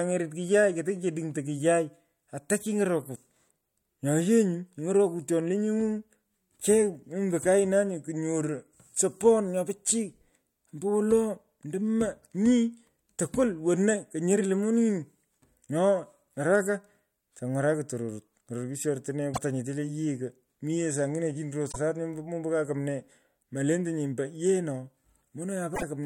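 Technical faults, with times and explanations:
19.31–19.38 s (before "nyete le"), 21.69–21.76 s (between "saangine chini" and "mombo ka kumnee"), 25.72–25.83 s: damaged data in a compressed stream. Corrupted frames make the decoder lose sync and hunt for the next header, leaving brief glitches of roughly 70–110 ms.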